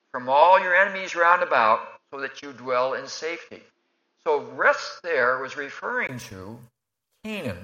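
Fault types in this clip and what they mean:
Input switched to a poorer device: Until 6.09 s the sound is dull, with nothing above 6.7 kHz. A brief gap marks the change, likely a device swap.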